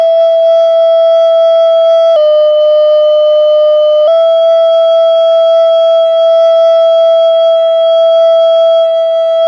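Wrong sample rate from 2.16 to 4.08 s: the music plays back slower than it was recorded, with no conversion, so speed drops to 0.919 times and pitch falls about 1.5 semitones together, which fits 24 kHz audio played at 22 kHz.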